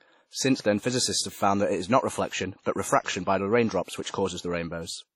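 Speech with heavy ringing, washy smearing and breathing hiss throughout, likely WMA compression at a low rate fitting 32 kbps, with nothing above 17.1 kHz.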